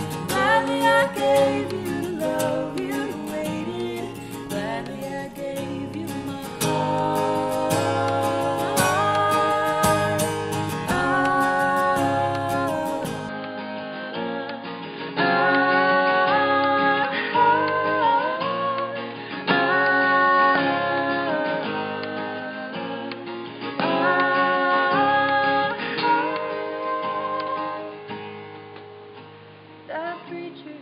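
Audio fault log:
13.29–30.82 s, input switched to a poorer device: with no gap and no real level jump, the sound suddenly goes dull and boxy, with nothing above 4.9 kHz and a new noise floor sitting well below the signal. That's likely the recording moving to a narrower-band microphone or headset profile.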